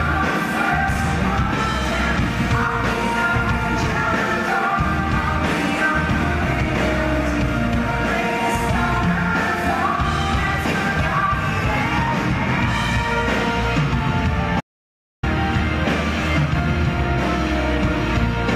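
At 14.61 s the sound cuts off abruptly and does not return until 15.23 s. This is an audio dropout to silence. For about 0.63 s the output holds nothing but silence. No room tone or background hiss remains underneath. The sound resumes mid-flow, just as suddenly as it stopped. Whatever occurred in that gap is lost. The likely cause is a brief loss of the input signal, while recording carried on writing silence.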